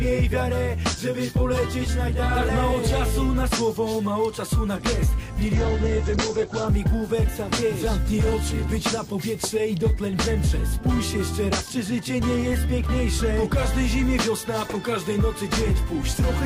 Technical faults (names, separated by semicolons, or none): call bitrate drop